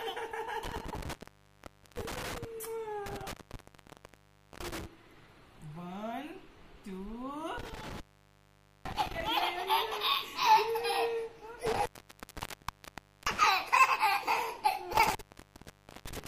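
The audio suffers from intermittent contact, a loose plug or cable briefly opening, at 0.65–2.45, 3.06–4.86, 7.58–9.28, 11.66–13.44 and 14.93–16.27 s. Each time the sound drops out for 0.83 to 1.41 s. A spectrogram shows near-empty gaps edged by thin vertical crackle streaks.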